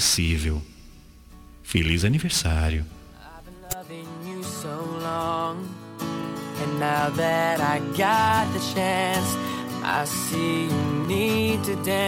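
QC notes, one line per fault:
9.62 to 12.02 s, train of clicks. A steady ticking sits on top of the sound from here to the end. The clicks arrive at about 4.2 per second with regular spacing, roughly ten in all. Each has much the same sharp, short shape. They reach about the level of the sound itself. The even pace suggests a repeating pulse, likely interference from nearby equipment or a faulty connection or power supply.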